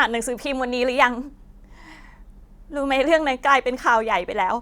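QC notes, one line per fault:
Nothing to flag here, this speech clip is fine as far as QC goes.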